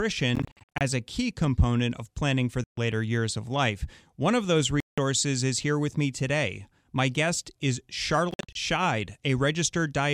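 The speech is punched with abrupt silent holes. From 0.35 to 0.81 s, just before "a key component of", it stutters through scattered short gaps, the longest about 53 ms. A solid gap follows at 2.64 to 2.78 s, another falls between "of those" and "is here with me" at 4.80 to 4.98 s, and after "guest is" a broken run spans 8.31 to 8.55 s. Each gap resumes as if playback had continued underneath. The likely cause is Bluetooth dropout, where packets reach the headphones too late and are discarded.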